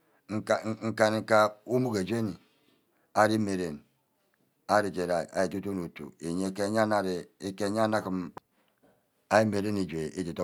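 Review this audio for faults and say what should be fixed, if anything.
Nothing to fix: no audible faults in the speech.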